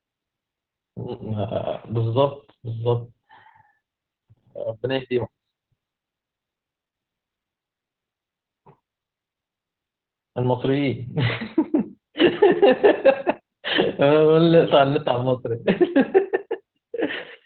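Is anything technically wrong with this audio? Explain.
Yes. Opus voice compression affects the whole clip. The codec's SILK coder limits speech to narrowband, with nothing above 4.3 kHz. Coarse coding, consistent with about 8 kbps, leaves it muffled and hoarse.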